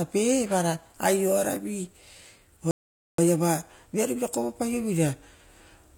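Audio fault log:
2.71–3.18 s, rebuffering stall: the speech drops to silence for 0.47 s, then resumes exactly where it stopped. Playback used up its downloaded audio and waited for more, so nothing is skipped; the gap is simply time inserted into the clip.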